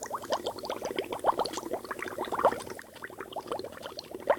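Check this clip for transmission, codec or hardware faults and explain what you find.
There is one fault: a sudden gain jump at 2.80 s. From there to the end, the whole signal, background included, drops by about 4 dB in a single step. That is likely a digital gain change applied without a ramp. Unlike a fade or compressor action, it is instantaneous and never recovers.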